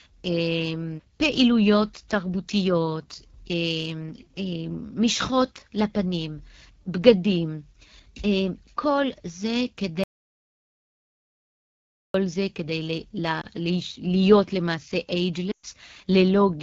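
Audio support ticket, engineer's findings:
Rough, raspy speech throughout, with plainly audible coding damage. AMR wideband (HD Voice) codec at 8.85 kbit/s, one of its two lowest rates, where the pulse-driven model loses detail.

Hard cut to dead silence from 10.04 to 12.14 s, about 2.1 s, with no room tone. Input likely lost through a device disconnect, a failed link or a stray mute, with silence recorded in its place.

Brief dip or warble at 13.41 s. Longer break from 15.51 to 15.66 s that falls to near silence and returns weak or rough, consistent with lost AMR speech frames. Decoder reused the last good parameters at falling gain. The 120 ms gap fits six 20 ms frames.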